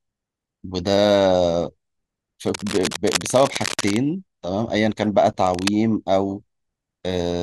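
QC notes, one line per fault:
2.46–3.97 s: cable scratch noise. Dense, uneven broadband crackle about 10 dB below the speech, likely from a worn connector's contact resistance changing. On a spectrogram it shows as ragged vertical streaks, and on the waveform as fuzzy spikes.
5.46–5.68 s: cable scratch noise. A brief rustling burst at a similar level, likely from the same contact fault. It appears as a short smear of broadband speckle and jagged waveform spikes.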